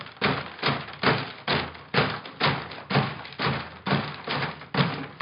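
No technical faults can be heard anywhere in the recording.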